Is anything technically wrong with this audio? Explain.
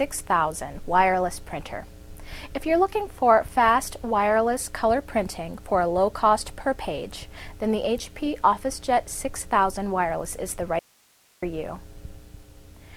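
Yes. From 10.79 to 11.42 s there is an audio dropout to a faint residue: the sound cuts out abruptly for about 0.63 s, leaving only hiss roughly 35 dB below the signal, then snaps back. The likely cause is the source feeding the path being lost while the downstream chain stayed live. On a waveform the envelope collapses to a thin noise band with sharp edges; a spectrogram shows a faint broadband wash instead of a gradual fade.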